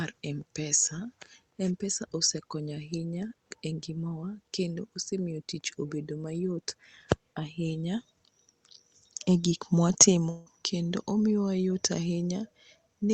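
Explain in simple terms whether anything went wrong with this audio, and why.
A long network dropout hits at 10.29 to 10.47 s, just before "kendo omiyo wa yot". For about 0.17 s no audio likely arrived, so the call stretched the last sound into a brief fading buzz or hiss, and that moment of the recording is missing when the sound resumes.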